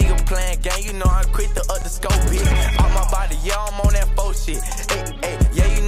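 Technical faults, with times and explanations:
0.42–2.98 s, CD scratch ticks: twelve tiny ticks, about five a second, the longest about 7 milliseconds, where a disc blemish defeated error correction each revolution.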